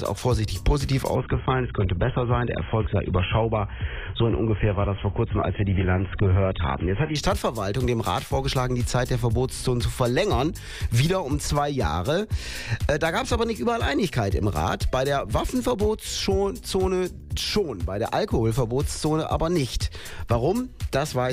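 From 1.16 to 7.16 s the adaptive stream drops to a lower bitrate, roughly 16 kbit/s by the sound. The treble vanishes above 3.8 kHz, artefacts rise, and quality snaps back without any gap.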